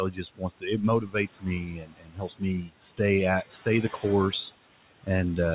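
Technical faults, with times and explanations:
Throughout: noise suppressor artifacts. The suppressor pulls the room noise down by about 15 dB, judging each short frame and each frequency band separately. The background, which sits about 16 dB under the speech, drops away in pauses and comes back beneath each phrase. All of it sits inside a band with nothing above 4 kHz, which fits a G.711 A-law call path at 64 kbps.
0.1–0.66 s, 1.01–2.43 s and 2.61–3.0 s: speech cut by the noise suppressor. In these stretches the suppressor mistook parts of the speech for background and turned them down with it. The deepest dips are about 19 dB, 18 dB and 15 dB. Roughly 0.4 s is affected in the first span, about a second in the second, and a brief moment in the third. Soft consonants and quiet endings sound swallowed or faded.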